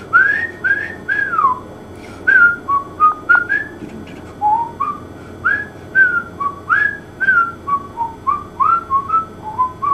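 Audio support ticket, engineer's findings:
DAB burbling at 3.12–3.36 s and 7.22 s: short noise blips in single sub-bands as a roughly 0.3–0.5% bit error rate slips past decoder FEC, corrupting MP2 audio data. Spectrogram shows isolated sub-band noise blips.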